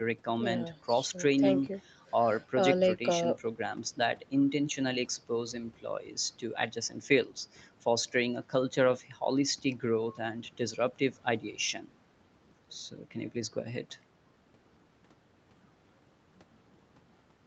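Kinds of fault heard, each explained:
Nothing stood out on listening to this speech, whose top end stops at about 8 kHz, as expected after call processing and the Opus codec.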